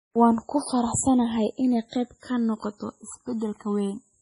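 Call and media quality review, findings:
Channels drifting apart, whole clip: two capture devices on separate clocks, mismatch around 200 ppm, inter-channel delay creeping to about a millisecond by the end. Mono sum turns the sliding delay into comb notches sweeping slowly through the spectrum. Heard as slow flanging over the speech, changing as the delay grows.

Heavy codec damage, whole clip: likely MP3 encoding at a low bitrate, consistent with about 24 kbps. Weak frequency lines dropped and restored frame to frame, giving a watery, swirling texture and smeared attacks. Hard treble cutoff, nothing above 10.6 kHz.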